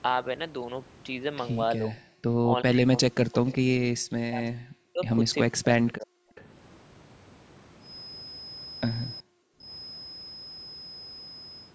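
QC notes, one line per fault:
1.77–2.01 s, speech suppressed in double talk: the speech dips by about 25 dB for roughly a fifth of a second, likely the echo canceller ducking the near talker while the far side spoke.
2.43–5.04 s, speech suppressed in double talk: about two seconds of the speech drop away, falling by up to about 40 dB, likely because the echo canceller couldn't separate the talker from loudspeaker echo during overlap.
3.47–3.52 s, echo leak: a faint delayed copy of the speech arrives 377 ms late, about 20 dB below it, likely loudspeaker pickup the echo canceller failed to remove.
5.46–6.18 s, speech suppressed in double talk: roughly half a second of the speech drops away by up to about 40 dB, likely the canceller attenuating both sides while they talked over each other.
5.86–5.92 s and 6.35–6.44 s, echo leak: brief scraps of the speech return 381 and 382 ms late, about 25 dB down, likely residual loudspeaker echo slipping past cancellation.
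9.21–9.67 s, speech suppressed in double talk: about half a second of the speech falls by up to about 40 dB, likely suppression applied during simultaneous talk.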